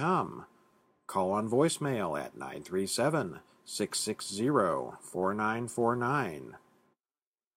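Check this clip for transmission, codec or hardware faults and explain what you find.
No faults turn up anywhere in this speech clip.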